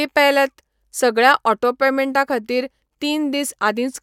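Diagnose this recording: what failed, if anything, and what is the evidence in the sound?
Nothing failed; no fault can be heard anywhere.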